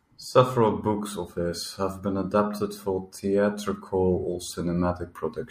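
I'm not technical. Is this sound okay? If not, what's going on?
Yes, nothing in this recording stands out as a technical problem, so the sound itself is in good shape.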